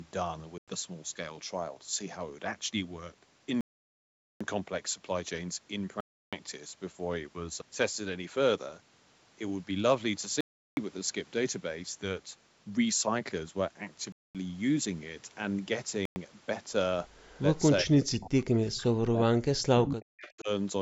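It's a speech clip, and the first thing you'll notice is a string of Bluetooth stalls, where the audio drops to dead silence and then resumes. They hit at 0.58–0.68 s, 3.61–4.41 s (the long one, about 0.8 s), 6.01–6.33 s, 10.41–10.77 s, 14.12–14.35 s and 16.05–16.16 s. That stop-and-resume pattern is most likely radio interference holding up packets until the headphone buffer runs empty, with playback waiting for the retransmissions to catch up. Toward the end there's echo leak, a delayed copy of the talker coming back about 367 ms late. It shows up at 17.18–17.41 s, 18.00–18.13 s, 19.85–19.95 s and 20.17–20.40 s. The first pass is very faint, but by around 19.9 s it's only a little quieter than the direct speech. That's likely a loudspeaker on one end whose echo canceller didn't fully scrub what its mic picked up, so the leftover got sent back. Overlapping that same stretch, you get speech suppressed in double talk from 17.83 to 19.62 s and again from 19.84 to 20.49 s. 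The talker's level gets pushed way down, at its worst by something like 40 dB, and parts of it come through thinned or gapped while the other side is talking. The likely culprit is the echo canceller failing to tell the local voice from the returning echo and ducking both. The band tops out around 8 kHz, which is just the call's mic processing doing its thing.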